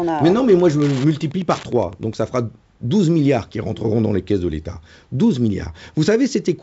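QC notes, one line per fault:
0.00–2.14 s, Wi-Fi interference: steady ticking about ten times a second, roughly 20 dB below the speech. A nearby radio's beacon, repeating every 102.4 ms, is rectified by the audio circuit. It stops just before "ça fera".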